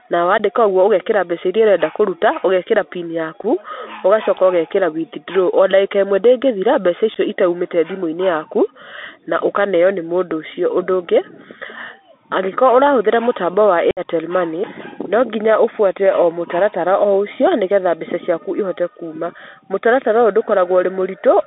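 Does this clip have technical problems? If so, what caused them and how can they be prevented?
Yes. The speech carries the Bluetooth CVSD headset codec throughout: a 64 kbps one-bit delta modulator that follows the waveform in adaptive up-down steps within a 250 Hz to 3.6 kHz band. That gives a granular hiss and scratchy sibilants, which sets it apart from plain band-limiting. Using a wideband (mSBC/LC3) headset profile prevents it.

There is also unconcealed Bluetooth headset packet loss. Abrupt holes of about 15 ms at 0.38 s, 7.5 ms at 3.43 s, 15 ms at 7.14 s and 60 ms at 13.91 s (roughly fifteen packets) were left as gaps rather than filled in. A better radio link with less interference or distance prevents it.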